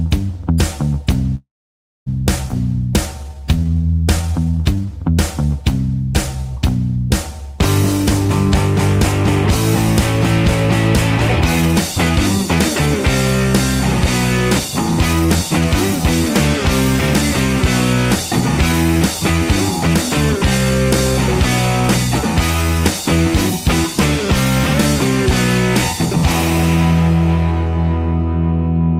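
A call audio freeze runs from 1.35 to 2.08 s. The sound stops moving forward and the last moment trails on briefly before dropping to silence for about 600 ms. The pause totals about 0.71 s. When the audio resumes, it picks up exactly where it left off with nothing lost, so the gap is inserted rather than cut out. This likely means packets were held up in transit and the jitter buffer ran dry.

A skip ahead follows at 2.48 to 2.51 s. Playback jumps forward almost seamlessly, and roughly a third of a second of audio is simply gone. The two sides are butted together with only a tiny join. This happened because a stretch of audio was discarded while later material was already queued, which pulls back much of the delay the freeze had added.

A jitter buffer slow-down covers 3.23 to 4.87 s. The receiver repeated single pitch periods and slivers of pauses many times over, adding about 294 ms to rebuild its reserve. 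The audio drags at about 83% of normal speed, with sustained sounds stretched out while pitch stays the same. A faint warble can come through the repeated cycles.

Jitter buffer speed-up appears four times: 8.04 to 8.30 s at 112%, 11.62 to 12.88 s at 123%, 15.13 to 16.49 s at 119%, and 18.72 to 19.95 s at 107%. Each time, the buffer held more audio than it wanted, and the receiver trimmed short slices of one or a few pitch periods in quick succession. Altogether it removed somewhere around three quarters of a second. Pitch holds, but the sound is noticeably hurried, most of all in the second and third stretches.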